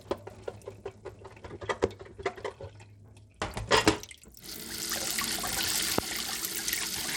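A gritty grain rides on the sound throughout, with nothing above 19.6 kHz, the plainly audible coarse quantisation of likely Bluetooth SBC compression, consistent with roughly 96 kbps. From 0.10 s to 7.05 s, regular ticks repeat every 0.248 s, about thirty in all: periodic USB or driver dropouts, each skipping around 2 ms of audio.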